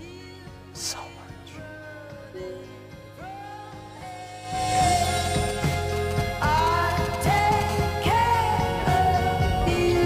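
From 5.17 to 7.63 s you get GSM signalling bursts: a nearby 2G phone handshaking with its network, its radio pulses rectified by the audio circuitry. It comes through as a galloping dit-dit-dit of short 217 Hz buzzes, fairly prominent at roughly 10 dB under the sound.

Then at 7.69 s it settles into a steady GSM phone buzz running to 10.01 s, as the phone goes into a call and transmits continuously at 217 bursts per second. That gives a hard, raspy 217 Hz drone packed with harmonics, sitting about 22 dB below the sound.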